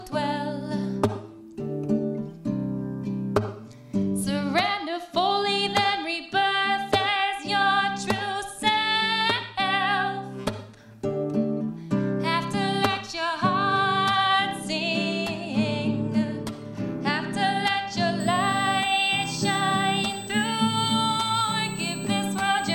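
USB whine appears at 18.2 s and lasts to the end of the audio: a steady, fixed-pitch tone at 8 kHz, sitting about 15 dB below the signal. It comes from the bus's 125-microsecond microframe current draw leaking through power or ground.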